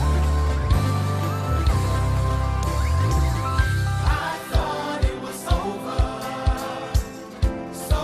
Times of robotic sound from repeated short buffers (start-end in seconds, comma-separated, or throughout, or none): none